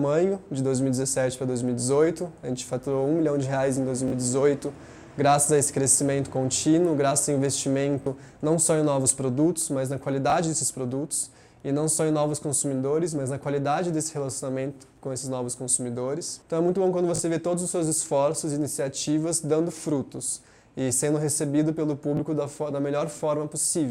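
Bluetooth stutter hits at 4.08–4.12, 8.02–8.06, 10.30–10.32, 17.16–17.20 and 22.17–22.19 s. Lost or late wireless data made the receiver replay its last buffer for 19 or 37 ms, giving a brief stuttering repeat. The waveform shows short identical cycles, and the spectrogram shows thin vertical striping.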